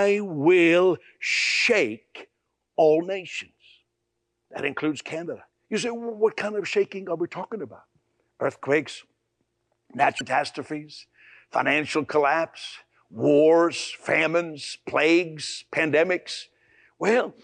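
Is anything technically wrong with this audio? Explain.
Yes. From 10.18 to 10.23 s the speech carries damaged data in a compressed stream: corrupted frames make the decoder lose sync and resynchronise, producing a short glitch, seen as a brief broadband smear and waveform discontinuity.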